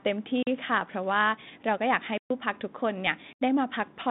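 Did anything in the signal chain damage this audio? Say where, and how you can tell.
Yes, in the driver's buffer. Blocks of digital silence at 0.43, 2.18 and 3.33 s, 43 to 128 ms long, cut the sound out and back with no fade. The output buffer went unfilled.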